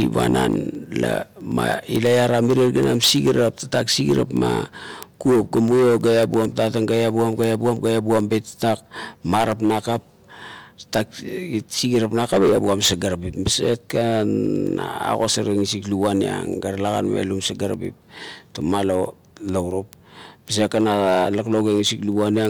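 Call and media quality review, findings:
Word clock ticks, 0.20–22.45 s: sharp single-sample ticks, uneven strength, about ten per second. Unlocked digital-link receiver slipping samples, roughly 200 ppm clock mismatch. Rigid regular rate rules out random packet-loss clicks.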